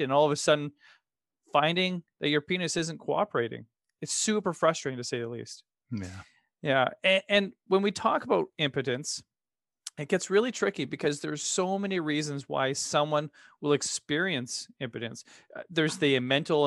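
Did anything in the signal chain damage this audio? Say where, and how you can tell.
Yes. At the driver or buffer stage there is a repeated buffer at 13.92 s, just after "reasons why someone will". A tiny slice of about 2.9 ms, which fits a 128-sample buffer, plays twice more, giving a click or brief buzz with a hard join at each repeat. The device got no fresh audio in time and replayed its last buffer. Unlike a dropout, no silence or gap appears and essentially nothing is lost; the same material simply recurs.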